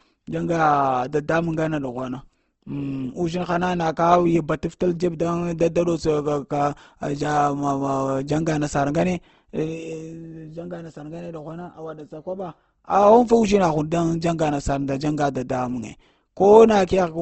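Speech that's plainly grainy and rough all the way through, with nothing above 8.2 kHz, likely Opus compression at a low bitrate, around 16 kbps.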